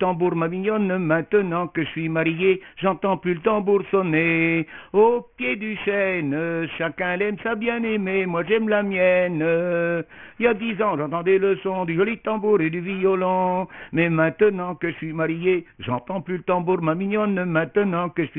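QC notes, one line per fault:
throughout: aliasing, content above 3 kHz folds back as gritty, unrelated tones roughly 20 dB down. This fits resampling to 6 kHz without filtering, unlike clean low-pass dullness.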